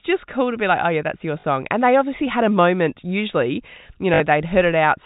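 A short robotic stutter comes at 1.40 s, just after "oh yeah that's your", lasting 40 ms, and again at 4.14 s for 60 ms, buzzing near 50 Hz, which fits 20 ms packets. This is packet loss with the last packet repeated: the receiver replayed stale audio over the telephone-band G.711 sound.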